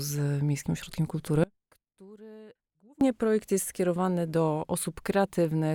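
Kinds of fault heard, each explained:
Audio dropout to a faint residue: The sound cuts out abruptly at 1.44 s and returns at 3.01 s, about 1.6 s later. The gap is not silent. A faint trace of the sound carries on, far below normal level. The likely cause is a break in the wanted signal while the path after it stayed live.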